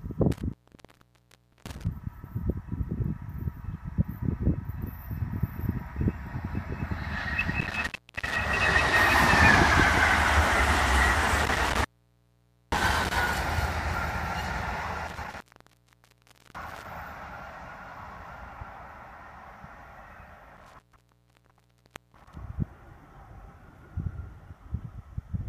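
An intermittent contact drops the signal five times, at 0.32–1.87 s, 7.60–8.36 s, 11.38–13.18 s, 15.08–16.86 s and 20.57–22.35 s. A loose connection opens the line for 0.36 to 1.35 s each time, so the sound cuts out to faint hiss, with crackle where contact breaks and remakes.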